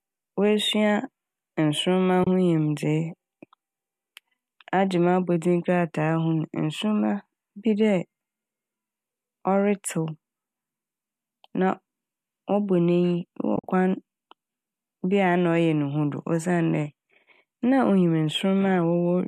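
Speech with AAC frame loss with muting: soft-faded dropouts at 2.24 s (about 30 ms, fitting three lost frames) and 13.56–13.66 s (scattered gaps, longest about 50 ms), appearing as brief blank vertical strips on a spectrogram, likely from low-delay AAC packets dropped in transit.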